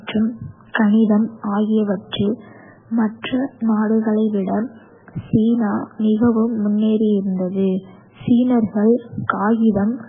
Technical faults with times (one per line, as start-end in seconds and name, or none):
0.00-10.08 MP3 compression
3.22 pre-echo